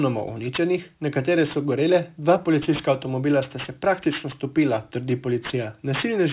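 Aliasing runs the whole way through: high content folds back around 4 kHz, which fits an unfiltered drop to 8 kHz, leaving sibilants gritty and metallic, with the folded content roughly 20 dB down.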